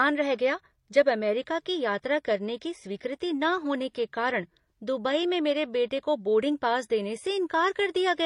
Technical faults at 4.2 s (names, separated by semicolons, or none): transcoding between lossy codecs